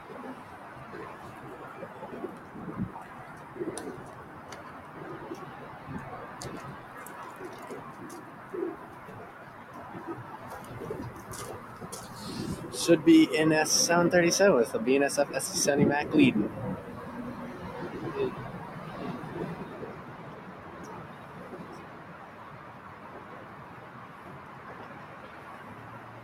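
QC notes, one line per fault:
Throughout: noise suppressor applied to music or sounds. A speech-tuned suppressor treats sustained tones and tails as noise, ducking them roughly 10 dB; the waveform pumps and the spectrogram shows fading sustains.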